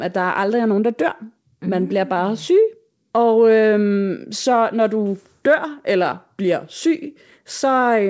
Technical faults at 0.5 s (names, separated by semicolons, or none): none